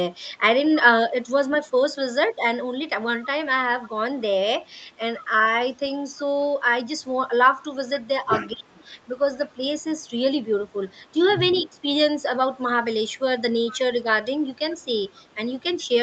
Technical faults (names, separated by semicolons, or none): echo leak; speech suppressed in double talk